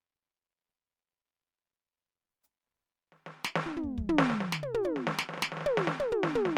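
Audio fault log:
throughout generation loss: the music was likely decoded and re-encoded about four times with a lossy codec whose character fits MP3 near 100 kbit/s. Each pass requantised on a shifted frame grid, stacking noise and spectral holes into a swirly, hollow smear with blurred attacks.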